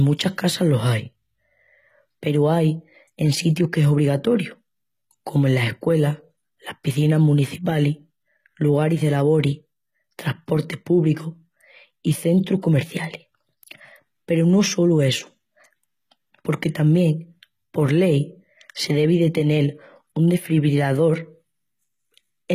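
A speech recording with HE-AAC compression damage that runs the whole way through. The treble sounds synthetic. The s sounds come out gritty and lispy, with a metallic edge. Nothing survives above 14.9 kHz. The damage is plainly audible. This likely comes from a low-bitrate HE-AAC encode, fitting roughly 20 kbps. Only the lower spectrum is truly coded. The treble is rebuilt from copied lower bands, so its harmonics no longer line up.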